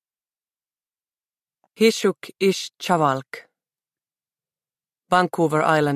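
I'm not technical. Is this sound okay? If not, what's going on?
Yes, nothing wrong can be heard here; the sound comes through steady and intact, with no dropouts, glitches or distortion anywhere.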